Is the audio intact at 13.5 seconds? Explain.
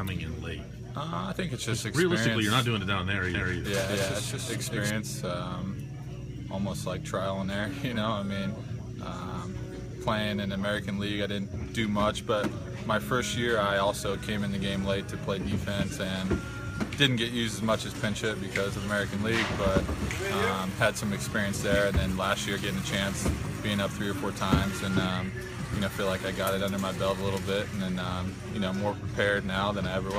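Yes, the audio is intact at 13.5 seconds, with no dropout, glitch or other technical fault heard at that moment.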